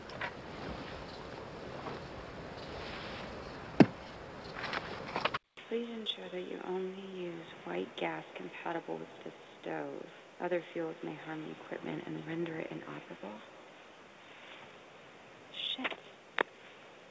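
At 5.37 s the sound cuts out for about 200 ms, then returns roughly 10 dB quieter, band-limited to 3.8 kHz against the earlier 8 kHz call bandwidth, with new background noise around 35 dB below the signal, most likely an input switched to a poorer device that persists to the end.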